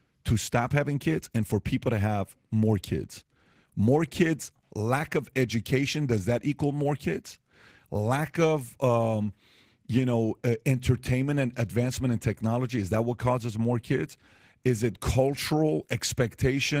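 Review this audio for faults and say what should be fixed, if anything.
Opus voice compression runs through the whole clip, and the damage is plainly audible. The speech has the coarse, slightly hoarse and robotic texture of a linear-prediction coder working from a thinly coded excitation, with a separate layer carrying the band above 8 kHz, which fits hybrid mode at a low rate of around 16 kbps. The codec works in 20 ms frames. To prevent it, encode at a higher bitrate or keep an uncompressed master.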